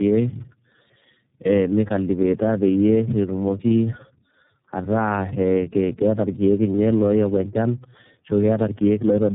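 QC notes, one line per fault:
Throughout, tandem speech coding: three speech coders in series, which fits AMR-NB then iLBC twice, each re-coding earlier damage, so speech sounds rough, warbly and muffled, with nothing above 3.7 kHz.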